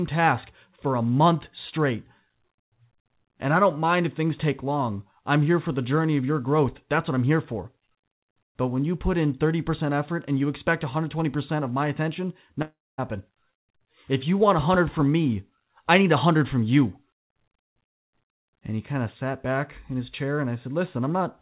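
A long network dropout runs from 12.62 to 13.0 s in this speech clip, just after "of my attention": the last sound is stretched into a fading buzz, then silence, before the audio resumes with roughly 0.36 s missing, likely from lost packets. The band stops at 4 kHz, which fits a G.711 call path.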